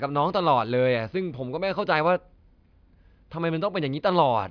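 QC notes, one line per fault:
No technical faults are audible anywhere in the clip.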